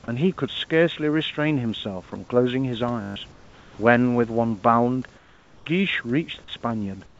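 At 3.02 to 3.16 s a system hang loop occurs. A 20 ms slice of sound repeats about seven times while the driver or host is stalled and the hardware keeps replaying its ring buffer. It is heard as a steady 50 Hz buzz, and roughly 150 ms of real audio is lost.

At 3.32 to 3.78 s, 5.16 to 5.66 s and 7.06 s to the end, the room background is replaced by smoother noise of a different tone, about 5 to 6 dB quieter. This is likely comfort noise in place of the background, inserted by the receiver while discontinuous transmission paused the G.722 stream. That stream has no content above 8 kHz.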